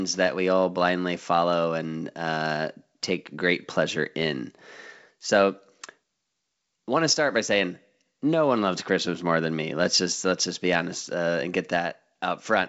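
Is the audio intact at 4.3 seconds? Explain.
Yes, the audio is intact at 4.3 seconds, with no fault there.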